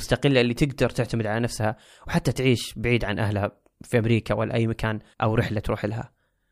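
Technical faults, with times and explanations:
No technical faults are audible in this speech.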